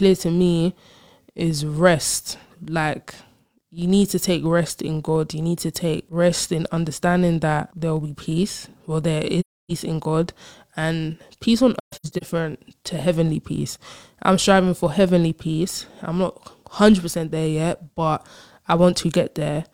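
A steady low buzz at about 43 Hz runs through the whole speech clip, rising and falling with the level of the voice. This is a filter restarted on every block: each block starts from silence and adds a small tick, which fits a 1024-sample block.

From 9.40 to 9.72 s the sound fades out into a soft-edged gap of about 0.3 s. A second gap from 11.80 to 12.23 s is broken into several dropouts, the longest around 150 ms. Both come from AAC frame loss with muting, where the decoder zeroed the lost frames and the overlapping windows smoothed the edges.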